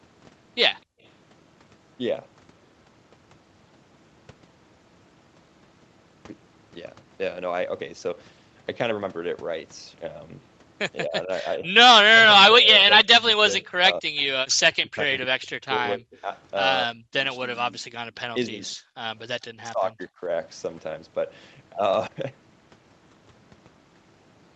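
Speech recorded through a call path, top end stopping at about 8 kHz, carries three kinds of echo-canceller fault. First, background gated by the echo canceller: while the far side played through the loudspeaker, the canceller clamped the microphone hard, so the room tone drops out at 0.83 to 1.02 s by about 30 dB and again briefly at 18.92 to 18.98 s by about 36 dB, returning each time the canceller releases. Second, speech suppressed in double talk, likely because both sides talked at once and the canceller could not tell the near talker from loudspeaker echo, so it turned everything down. The voice dips or breaks into pieces at 11.08 to 11.71 s (a mild dip, around 10 dB), 12.04 to 16.3 s (roughly 3 s of losses, down around 35 dB), 16.86 to 17.93 s (about 1 s, down around 40 dB), 18.3 to 18.64 s (around 20 dB) and 19.26 to 20.21 s (most of a second, around 40 dB). Third, an echo leak at 14.17 to 14.21 s: a faint scrap of voice, around 30 dB below the speech, arrives 252 ms late, likely residual loudspeaker pickup that one side's canceller failed to remove and sent back.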